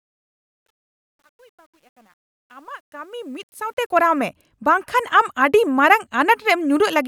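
From 0.0 s to 4.25 s the speech fades in with truncation distortion on the fade. The level stage drops low bits without dither, consistent with roughly 10-bit resolution. Up to 3.03 s it sounds gritty, and the waveform shows blocky square steps with broadband hash on a spectrogram.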